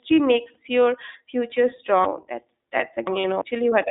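Throughout, the line is coded with the iLBC codec, squeezing the sound into a band of roughly 200 Hz to 3.7 kHz, with framing that fits its 20 ms, 15.2 kbps mode. The coding is plainly audible: the speech sounds thin, rough and faintly synthetic, with no top end.

At 0.54 to 0.56 s, just before "your future", lost iLBC frames force the decoder to fill a gap the length of one 20 ms frame by repeating the last pitch cycle with added noise. This leaves a brief buzzy hold before the speech snaps back.

From 2.05 to 3.41 s, right after "your future", chunks out of order occur. A block of about 341 ms was written three chunks late, so the audio jumps around. Nothing is missing, but the sequence is scrambled and there are three hard joins.

Within that stretch, at 3.20 to 3.25 s, more lost iLBC frames leave a 40 ms gap, consistent with two frames. It is concealed as a slightly breathy, held vowel-like smear.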